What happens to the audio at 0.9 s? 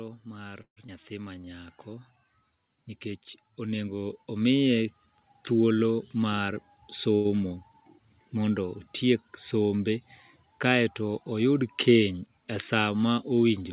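At 0.87 to 0.90 s the playback skips ahead. Roughly 70 ms of speech is gone. Later audio was already waiting, so the missing stretch was dropped and playback jumped forward to catch up. Only about 15 ms of fill bridges the jump. The two sides are joined almost directly, so the sound lurches with a small clipped gap rather than a pause.

The same moment falls inside an automatic gain rise from 0.23 to 4.97 s. The gain control judged the input too quiet and kept raising its gain, by about 13 dB in all. Speech and background swell together over those several seconds. At 0.9 s the level is still climbing.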